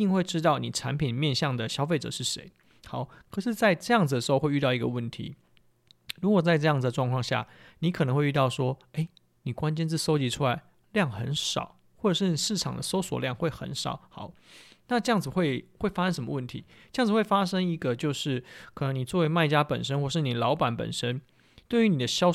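No technical faults turn up anywhere in the recording. The speech has nothing that calls for comment from its opening to its close.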